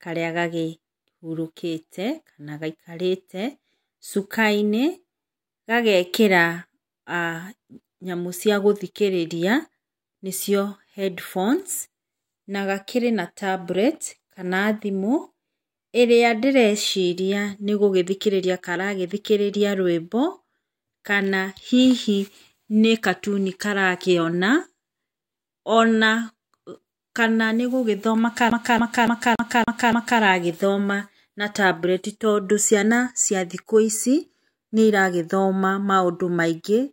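Right after "kana nĩgũgĩthoma", at 28.5 s, the speech gets caught in a classic CD stuck on one turn. The same 285 ms slice plays six times in a row until about 30.21 s, with a brief mute at every jump. What's going on is a scratch kicking the laser back one track at the same spot each rotation, so you hear that quick, perfectly regular stutter you'd know from any skipping disc.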